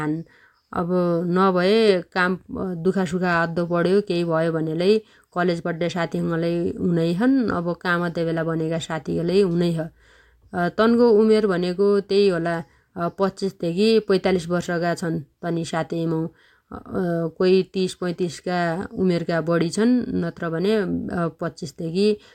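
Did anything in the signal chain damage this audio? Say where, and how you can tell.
No, nothing along the chain from capture to playback audibly damages this speech recording.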